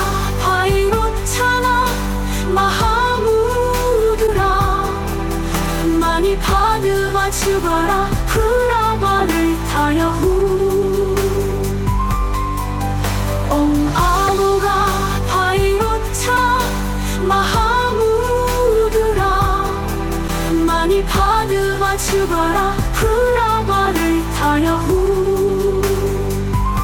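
A broken MP3 bit reservoir is the likely cause of brief glitches at 4.26–4.29, 14.27–14.30, 16.36–16.38 and 20.27–20.30 s, where missing 24 ms frames leave the decoder reading stray bytes and the sound jumps ahead.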